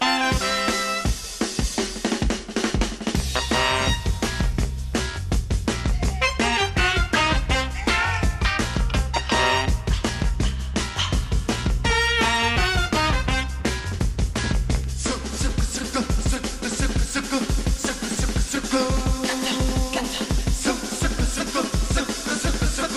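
Nothing goes wrong anywhere in this recording; there's no dropout, glitch or distortion to point to at any moment.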